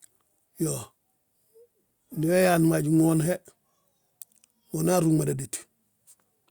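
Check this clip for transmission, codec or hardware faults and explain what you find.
I found no faults in the clip to explain.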